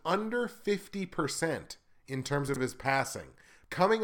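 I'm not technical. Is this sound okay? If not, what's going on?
No. There are chunks out of order at about 2.48 to 2.56 seconds. The speech is cut into tiny 20-millisecond pieces as it is handled, and one piece arrived late and was played three pieces after its proper place. Nothing is missing, but that brief stretch of speech comes out jumbled, with three abrupt joins where the pieces meet.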